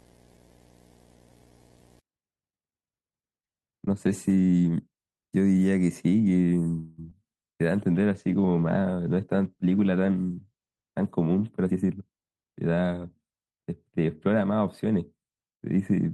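From 0 to 2.0 s a buzz at 59.94 Hz sits under the speech, with hash above it and a thin, very high whine near 15.7 kHz, about 25 dB below the signal. This is video or display buzz: a screen or video cable coupling its field rate and line rate into the audio path.

At 6.79 s the sound stops moving forward and trails off as a fading buzz or hiss for 186 ms before resuming at 7.0 s. Nothing seems lost, but a gap of that length has been inserted. The likely cause is a call audio freeze: packets stalled in transit, and the receiver's jitter buffer ran dry and stretched the last sound until delivery resumed.

At 7.1 s there is a brief smear lasting a few hundredths of a second. This is short concealed packet loss. About 20 ms of audio never reached the decoder in time, and the receiver covered the hole by continuing the preceding sound, then blended back into the real stream.

From 7.72 s to 12.31 s the speech turns rough or watery and loses its top end. 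It is at its worst for about 3.4 s within that span. This is a call bitrate drop, consistent with the encoder being cut from about 32 to 17 kbps after the bandwidth estimate fell, forcing coarser coding with the highs trimmed.

Overlapping its tail, from 11.68 s to 12.78 s, the speech hurries along at 116% speed while keeping its pitch. This is a jitter buffer speed-up: the receiver held too much backlog and clipped out many short pitch-period slices, shedding roughly a fifth of a second of delay.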